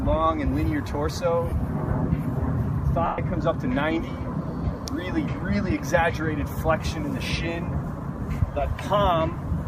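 At 1.50 to 1.52 s and again at 3.06 to 3.18 s, lost LE Audio frames leave gaps. The LC3 decoder fills each gap by reusing the last spectrum with random signs, which is heard as a noisy smear. The longer loss, fitting twelve 10 ms frames, fades after its first few frames. A spectrogram shows blurred, noise-like bands, and the waveform shows a decaying envelope.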